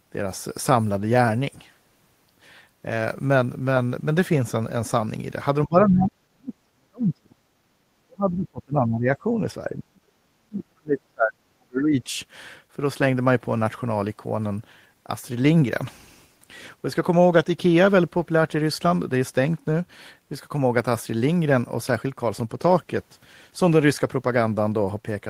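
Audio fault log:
5.66–7.40 s, 8.03–9.25 s, 9.68–10.10 s and 10.28–12.09 s, speech suppressed in double talk: the speech dips deeply, by up to about 40 dB. The likely cause is overlapping talk, which leaves the echo canceller unable to tell the near talker from loudspeaker echo, so it pulls both down.
7.68–7.75 s, background gated by the echo canceller: the room sound drops by about 16 dB for 70 ms, then returns. The canceller clamped the microphone hard while the loudspeaker played and released it moments later, producing a brief hole in the background.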